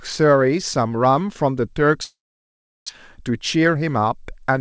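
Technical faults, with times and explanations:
2.04 to 2.91 s, long network dropout: the sound breaks off into a brief fading buzz, then about 0.72 s of near silence before it resumes with roughly 0.74 s of speech gone. This pattern likely comes from a run of packets that never arrived, with the receiver stretching the last sound before giving up.
2.99 to 4.19 s, jitter buffer speed-up: the speech runs about 6% fast at unchanged pitch and sounds slightly hurried. After the gap the buffer held around a tenth of a second too much audio, so the receiver cut short pitch-period pieces, about 70 ms in all, to catch up. The G.722 call path is audible as nothing above 8 kHz.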